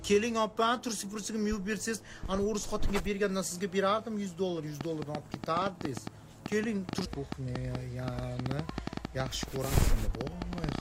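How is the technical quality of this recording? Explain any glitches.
The recording has one clear fault in its second half. From 4.81 s to 10.79 s, a train of clicks of about fifty sharp, similar pulses arrives irregularly at roughly 9 per second, peaking about 15 dB above the sound. Interference from nearby equipment or a faulty connection or power supply is the likely cause. It is heard as uneven ticking over the audio.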